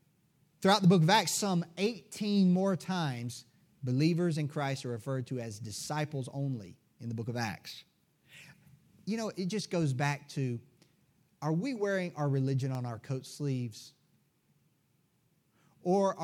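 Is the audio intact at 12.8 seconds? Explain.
No. At 12.75 s an electrical switching spike snaps through the speech. It is a sharp click, peaking at about -25 dBFS. It is likely a nearby switch or static discharge arcing briefly, with the audio line picking up the burst.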